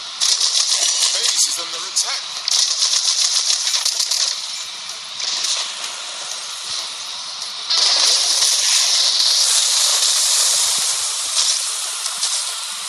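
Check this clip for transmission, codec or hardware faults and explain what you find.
One fault is present: a corrupt frame decoded between 4.53 and 4.62 s. Damaged compressed data for a few consecutive frames was played anyway, so misread codes and gains scattered energy into the wrong frequencies. It sounds like a brief chirpy burst near -15 dBFS, showing as a short broadband smear on a spectrogram and an abrupt jagged spike on the waveform.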